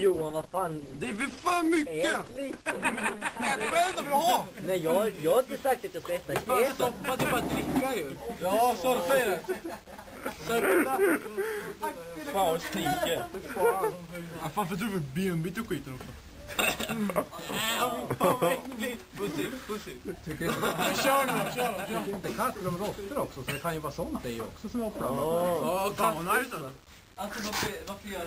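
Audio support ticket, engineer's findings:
Adaptive stream starting at a low bitrate, 0.0–4.0 s. Dull, band-limited sound with stronger codec artefacts, consistent with roughly 16 kbit/s Opus. At 4.0 s, abrupt jump to full treble, fitting about 64 kbit/s, no gap. Spectrogram: low ceiling, then sudden high-frequency fill. Waveform continuous. Player ABR ramp-up.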